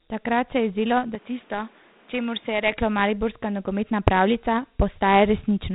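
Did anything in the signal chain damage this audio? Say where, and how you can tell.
Yes. The damage sits at the codec stage. The whole clip is Dialogic VOX ADPCM at 32 kbps, which fits 4-bit samples at 8 kHz. Nothing passes above 3.9 kHz. A gritty hiss rides on the speech, plainly audible, from coarse 4-bit step coding.

The input stage shows a second fault, from 1.15 to 2.72 s. After "se je zdelo" the sound turns duller and drops by about 5 dB. The band now stops near 3.8 kHz, with fresh noise about 30 dB down. There is no gap at the change. It clears before "mariborska nogometna pravljica". The likely cause is an input switched to a poorer device.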